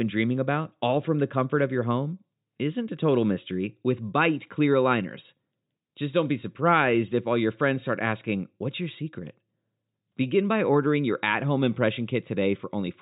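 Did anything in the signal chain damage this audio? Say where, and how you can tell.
No, nothing damaged this audio.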